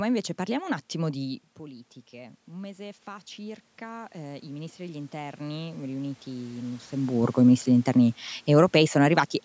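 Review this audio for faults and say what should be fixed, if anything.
From 1.58 s, just after "parliamo un attimo di", the voice and the room noise behind it swell together, climbing slowly until about 6.83 s, before "i ministri degli interni". This is automatic gain rising: when the talker moved back around 1 s, the input level fell by about 15 dB, and the gain control compensated by raising its gain about 10 dB over five seconds. A steady talker-to-microphone distance would prevent it.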